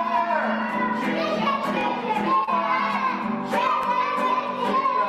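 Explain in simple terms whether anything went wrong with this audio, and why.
Yes, two things went wrong.

The first is overlapping chunks. The audio was handled in pieces about 2 seconds long, and each new piece began slightly before the previous one had finished. At every join, about 23 ms of sound plays twice. You hear this as a tiny stutter or click at 1.81 s and again at 3.83 s. Nothing is lost at these joins; a sliver is doubled. The exact 2-second spacing is what marks it as a chunking problem and not a random glitch.

The second is short concealed packet loss, between 2.44 and 2.52 s. About 20 ms of audio never arrived in time. The receiver covered the gap with roughly 32 ms of guessed sound, stretching on from what came just before, and then blended back into the real audio. The result is a brief smear or wobble, and the clip ends up a few milliseconds longer. This differs from the chunk overlaps because it happens only once, not on a steady 2-second beat. 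The missing moment is filled in with an imitation of the preceding sound, not replayed exactly.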